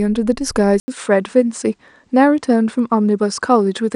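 At 0.8 s the sound drops out for about 80 ms, then returns duller, with nothing above 9.8 kHz and a faint new background noise roughly 50 dB below the signal, lasting to the end. The loudness stays about the same. This is most likely an input switched to a poorer device. The brief gap and the changed noise floor set it apart from a plain filter or codec bandwidth drop, which would narrow the band without a gap or a new noise floor.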